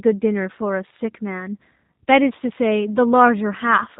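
Right from the start and all the way through, the speech carries G.729 codec damage, plainly audible. The coder rebuilds each 10 ms frame from a vocal tract model and a few pulses, which fits an 8 kbit/s G.729A link. Everything above 4 kHz is gone, so it sounds muffled, slightly rough and synthetic.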